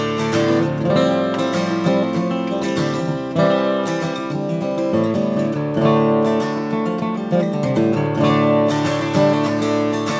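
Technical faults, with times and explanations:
No technical faults can be heard in this clip, so there are no times or explanations to give.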